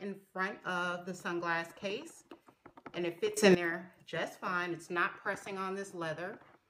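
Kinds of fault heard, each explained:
Sudden gain jump: At 3.37 s the whole signal leaps up by about 15 dB in a single step, with the background noise rising right along with the sound, and it stays at that raised level until 3.55 s before dropping back. Because everything shifts together with no fade, the change is likely a digital gain setting or bit shift applied instantly from one sample to the next rather than ramped in smoothly.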